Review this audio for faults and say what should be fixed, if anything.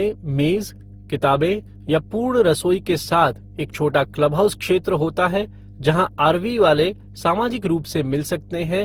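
Mains hum runs through the whole clip as a steady 50 Hz tone with low harmonics, sitting roughly 20 dB below the speech. A ground loop or a nearby transformer is coupling the power line into the signal path, so the hum is present during pauses as well as under the talker. Fix it at the source by breaking the ground loop with a single common earth point, balanced connections or an isolation transformer, and keep cables clear of power supplies.

Generation loss is also audible throughout. The speech sounds swirly, hollow and smeared, and consonant attacks are blurred more than a single pass at this quality would explain. The likely cause is repeated lossy decoding and re-encoding, around seven passes, consistent with an Opus chain at 48 kbit/s. Each pass quantises again on a shifted frame grid, so noise builds up, although content still extends to about 20.3 kHz. Prevent this by keeping a lossless master through every editing and transfer stage and encoding to a lossy format only once, for final delivery.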